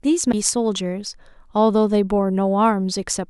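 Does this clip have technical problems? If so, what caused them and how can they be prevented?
Yes. At 0.32 s the speech cuts out for a brief instant, then carries on from a different point, so the flow of the sound is broken rather than just dropped. This is a CD skip: a knock to the player or a flaw on the disc threw the laser onto another turn of the spiral track, and the player muted very briefly before resuming playback from the new position. Preventing it means playing from a clean, undamaged disc on a stable, vibration-free player, or ripping the disc with an error-checking tool and using the file instead.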